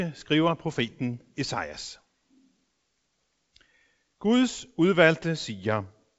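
Speech carried over G.722 wideband telephone coding, with nothing above roughly 7.7 kHz, and no technical fault to report.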